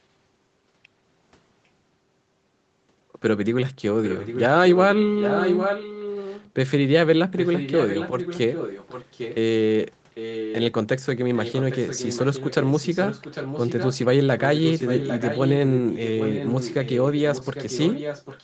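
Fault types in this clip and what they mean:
Echo leak: a delayed copy of the speech trails the original by about 0.8 s, roughly 10 dB below it, recurring from 4.03 s to the end. Between 4.7 and 6.5 s it is louder, around 5 dB down. This is likely residue a loudspeaker-side echo canceller failed to remove.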